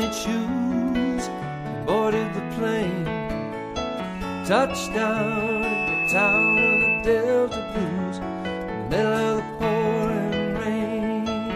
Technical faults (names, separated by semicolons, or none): loudspeaker feedback squeal